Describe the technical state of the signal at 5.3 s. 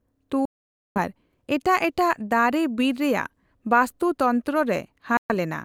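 A Bluetooth dropout runs from 5.17 to 5.31 s, so at 5.3 s the signal is still inside a silent gap, just before it ends. The speech cuts out and returns about 0.14 s later, roughly 126 ms of audio missing, with the speech resuming as if it had carried on underneath. This is likely a wireless link problem: packets reached the headphones too late to play, were discarded, and the output stayed silent until valid packets arrived again.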